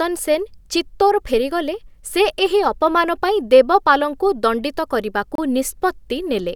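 At 5.35 s, just after "ଦେବପାଲଙ୍କୁ ଦଣ୍ଡିତ", the speech breaks into a hard-edged hole of silence 29 ms long, resuming at 5.38 s. It is a gap between stream segments: two segments' time stamps fail to meet, so the player fills the space with silence. No audio is lost.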